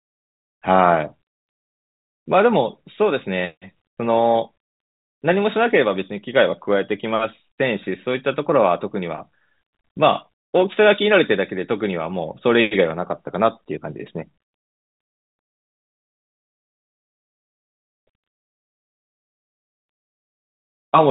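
No technical faults occur in this speech; the telephone-band coding it passes through is audible only as its normal narrow bandwidth.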